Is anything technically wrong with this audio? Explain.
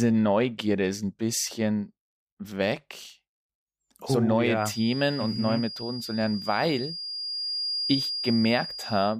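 Yes. From 4.53 s, just after "oh so neue", until the end of the clip, a feedback whistle sits behind the speech. A thin, steady tone at 4.8 kHz, about 10 dB below the speech, swells and fades slowly in level. It is likely a loudspeaker-to-microphone loop hovering just short of runaway, so that single frequency keeps ringing. Unlike mains hum, which is low and rock-steady, this tone is high and unsteady in level.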